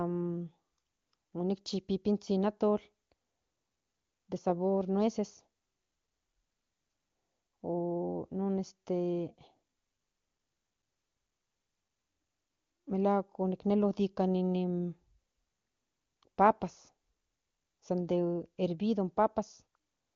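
Speech with no audible faults.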